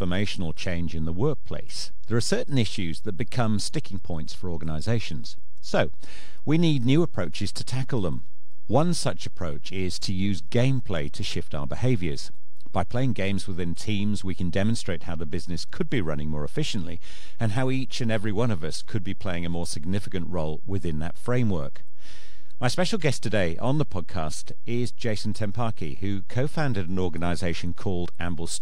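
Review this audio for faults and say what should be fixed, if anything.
A DC offset runs through the entire speech clip, from start to finish. The whole waveform sits shifted away from zero by a constant amount, about -20 dBFS. You cannot hear the shift itself. It still costs headroom, because peaks on one side reach full scale sooner. It also shows up as a steady component at 0 Hz at the bottom of the spectrum. It should be removed with a high-pass or DC-blocking filter. To prevent it, check the input chain for offset and keep a DC-blocking filter in the recording path.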